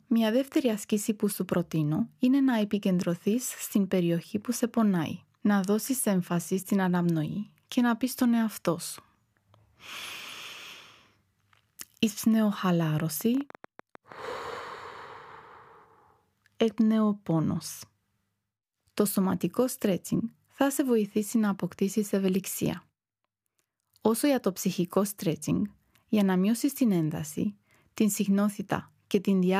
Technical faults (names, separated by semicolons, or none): train of clicks